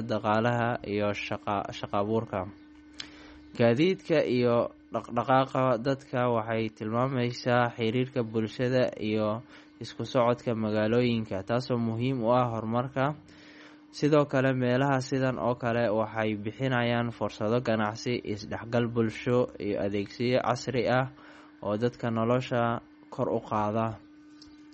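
Throughout, the speech has nothing above 8.3 kHz and warbles wetly on s sounds. The likely cause is MP3 compression at roughly 32 kbps, since a simple low-pass would not swirl.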